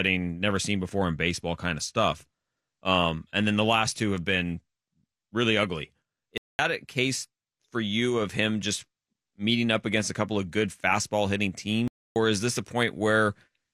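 At 6.38 s the speech cuts to silence for about 210 ms, and again at 11.88 s for about 280 ms, then picks up again. That's a playback stall, likely the player running dry of data or its thread getting blocked.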